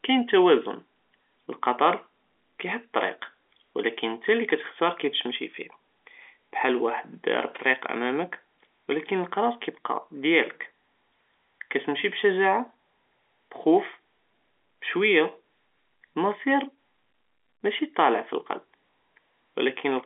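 Speech over a telephone line, with nothing technically wrong.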